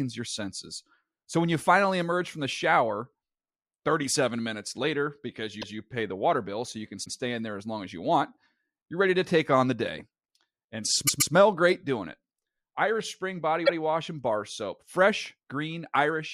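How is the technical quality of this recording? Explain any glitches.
The recording has four short stutters from repeated frames. At 5.61 to 5.76 s, between "minutes later because" and "pay the water bill", a 157 ms block of compressed audio plays twice. At 7.04 to 7.15 s, after "bill so you can", a 105 ms block repeats once. Just before "great doing it", from 11.06 to 11.33 s, a 131 ms block plays three times in all. At 13.65 to 13.78 s, another 131 ms block repeats once. Each repeat sounds like a quick hiccup. It differs from a dropout or skipped packet because nothing is lost: an intact fraction of a second is heard again, and the clip runs longer by that amount.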